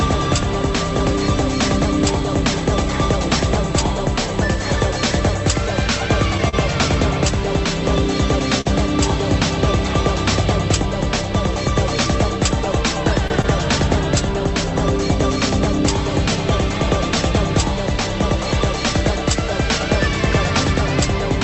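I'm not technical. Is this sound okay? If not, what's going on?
No. There are two kinds of glitch in this sound, which came through a call connection.

At 6.49 and 8.61 seconds there is a short stall from a late packet. A piece of the call arrived late, so the receiver held the last bit of sound for about 40 ms until it caught up. Nothing is lost. You hear a sound drawn out slightly too long, perhaps with a faint buzz. The timing of everything after each stall shifts a little later.

At 13.28 and 13.42 seconds there is short concealed packet loss. About 20 ms of audio never arrived at all, so the receiver guessed and filled each gap, then blended back in. Unlike the stalls, something is actually missing here. Listen for a quick smear or wobble, and a very short sound may disappear entirely. These two come as a pair only a tenth of a second apart.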